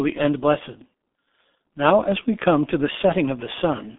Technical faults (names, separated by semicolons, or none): G.723.1 codec